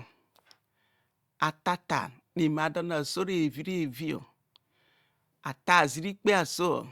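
Nothing goes wrong anywhere in this bit of speech, so there's no fault to point to at any moment.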